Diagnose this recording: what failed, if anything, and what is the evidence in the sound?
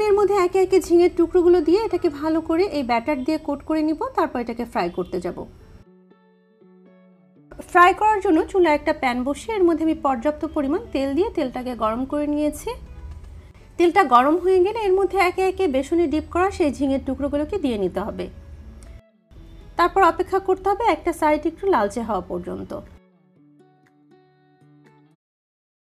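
Nothing stood out on listening, and the gentle fade-out that begins around 25 s and finishes at 25.16 s is an ordinary editorial ending rather than a failure.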